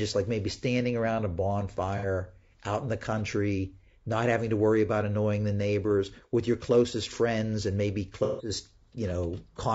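Throughout the speech, the grain and roughness point to likely low-delay AAC compression, consistent with AAC-ELD at a bitrate around 32 kbps. Its short frames, about 30 ms long, cannot separate closely spaced harmonics well and spend bits less efficiently, so the codec damage is plainly audible. Noise fills the gaps between harmonics, the voice turns rough and grainy, and the top band sounds dulled or synthetic.

From 1.97 to 2.06 s, just before "out in the country", AAC frame loss with concealment occurs. The decoder lost data, which fits two missing frames totalling about 60 ms, and rebuilt the gap from the last good spectrum. The result is a brief smeared, noisy patch. From 8.24 to 8.50 s, right after "closest friends and maybe", a longer gap, consistent with five frames or about 150 ms, is patched the same way. There the rebuilt patch lasts longer before the speech returns.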